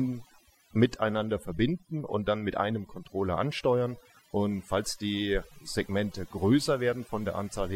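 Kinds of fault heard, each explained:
Overdone noise removal: A noise reducer set too hard has been run over this speech for its whole length. It pushes down every frequency band that sits close to its idea of the noise. Quiet parts of the speech fall into those bands and vanish with it. The gaps between phrases drop to near silence, dotted with small twinkling specks.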